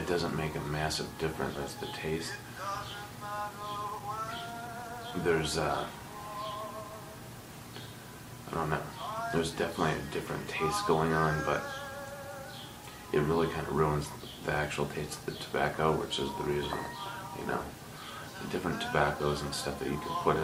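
At 1.55 s there is a skip ahead: around 0.7 s of audio was discarded, probably when an overflowing buffer caught up, and playback leaps forward with no gap. On a waveform or spectrogram, two unrelated stretches butt together at a hard seam, with no silence between them.

From 3.40 to 5.12 s a jitter buffer speed-up plays the sound at about 114% of normal rate. Short pitch-period pieces, about a fifth of a second in total, are trimmed repeatedly, so the sound feels hurried while pitch stays put. A spectrogram shows horizontally compressed events with unchanged harmonic spacing.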